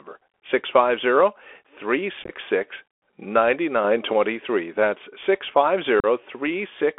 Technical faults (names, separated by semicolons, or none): Bluetooth CVSD headset codec; unconcealed Bluetooth headset packet loss; sudden gain jump